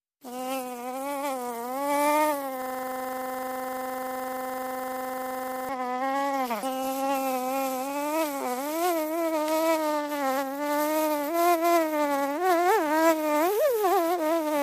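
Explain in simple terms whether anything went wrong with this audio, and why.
A system hang loop from 2.62 to 5.69 s: the computer froze while the sound hardware kept replaying one 43 ms slice, making a rapid, rattling buzz.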